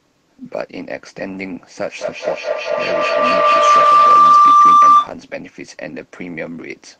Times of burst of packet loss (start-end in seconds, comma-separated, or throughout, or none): none